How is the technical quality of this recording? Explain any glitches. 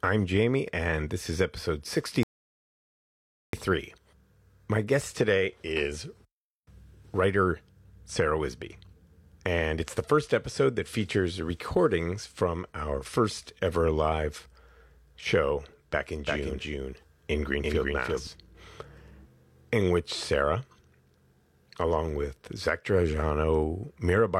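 The recording has two clear technical faults: a playback stall near the start and a stretch where the speech is doubled.

From 2.23 to 3.53 s, right after "and this is episode", a rebuffering stall occurs. The player exhausted its downloaded audio and waited for more, adding 1.3 s of silence before speech resumes exactly where it stopped. The waveform shows a flat gap, and the spectrogram shows a blank vertical band.

From 16.25 to 18.27 s, just after "show back in", a doubled audio track appears. A second copy of the speech, about as loud as the original, trails by roughly 300 ms, likely from a second, slower capture path. It sounds like a dry, roomless stutter that switches on and off abruptly. The spectrogram shows each full-band pattern repeated a fixed distance later.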